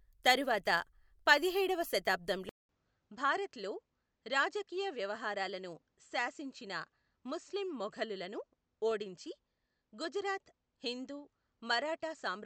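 At 0.55 s a single sharp click is heard, likely dropped samples: a handful of samples, a fraction of a millisecond, missing from the stream. At 2.49 s a 200 ms silence is followed by a duller, narrower-band, roughly 5 dB quieter sound with a faint new noise floor, likely an input switched to a poorer device. The same dropped-samples click recurs at 8.91 s.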